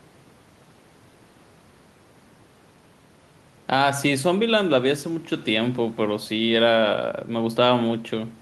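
Nothing stood out on listening to this speech recording.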